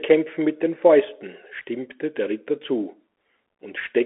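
Throughout, the speech sounds thin and boxed-in, with nothing above 3.8 kHz, a granular hiss underneath, and scratchy s sounds. This is the Bluetooth CVSD headset codec: one-bit up-or-down coding, which fits a 64 kbps stream, squeezes audio into a roughly 250 to 3400 Hz band, and its adapting step lags loud high sounds.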